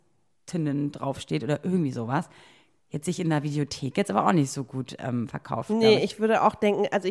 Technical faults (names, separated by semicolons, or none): none